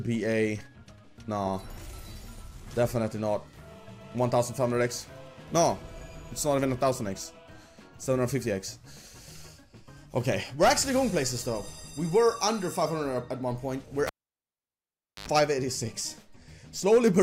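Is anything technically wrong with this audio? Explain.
Yes. From 14.07 to 15.28 s there is a cable pulled and plugged in while the signal was live. A pop marks the plug leaving the jack, then near silence for about 1.17 s with nothing connected. On reinsertion the tip touches first, so about 86 ms of 50 Hz mains buzz leaks in before the sleeve seats and a second pop brings the sound back. That brief buzz between two pops separates it from a clean digital dropout or a steady ground-loop hum.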